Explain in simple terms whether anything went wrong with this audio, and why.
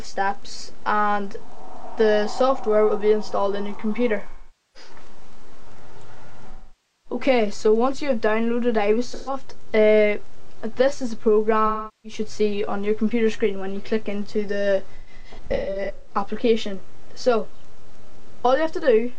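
AAC frame loss with concealment at 4.29–4.90, 6.51–7.20, 9.14–9.33, 11.66–12.20 and 14.95–16.15 s: pieces of the compressed audio went missing, and the player covered each gap by reusing the last good sound, leaving smeared, noisy patches. The last patch is broken into short bursts.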